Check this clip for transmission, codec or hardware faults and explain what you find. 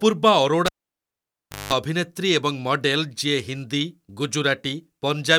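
There's one clear hardware fault here: a cable pulled and plugged back in, running from about 0.66 s to 1.73 s of the speech. You get a pop as the live connection breaks, then about 1.02 s of near silence with the line disconnected. As the plug goes back in, only the tip makes contact at first, so it picks up roughly 196 ms of 50 Hz mains buzz. A second pop follows when the connection seats and the sound comes back.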